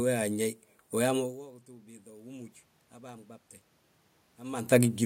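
Automatic gain rising runs from 1.45 to 3.35 s. Shortly after the talker moves around 1.0 s, the level reaching the microphone falls by about 23 dB, and the gain control answers by slowly turning itself up, adding about 6 dB over nearly two seconds. The speech swells back gradually rather than jumping, and the room noise rises with it, so the background audibly breathes upward along with the voice.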